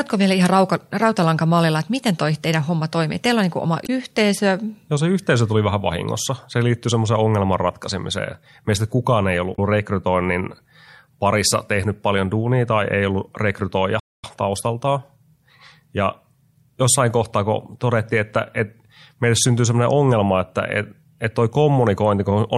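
At 3.83 to 3.90 s and again at 9.52 to 9.59 s there's damaged data in the compressed stream: a short glitch of about 70 ms each time. The decoder hits corrupted frames, loses its footing and skips ahead to the next clean header.

Then from 14.00 to 14.24 s the audio just drops out for about 240 ms before carrying on. That's a playback stall, most likely the player running dry of data or getting blocked for a moment before it caught up again.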